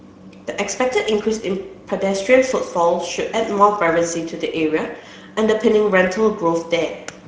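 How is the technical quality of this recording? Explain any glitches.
The quality is limited by plainly audible codec damage across the whole recording.

Speex codec artefacts run from start to finish. Speex is a CELP speech coder that models the voice as a filter driven by a coded excitation signal, and at this setting too few bits go to that excitation, which fits a rate near 16.8 kbps. The speech therefore comes out noisy and hoarse.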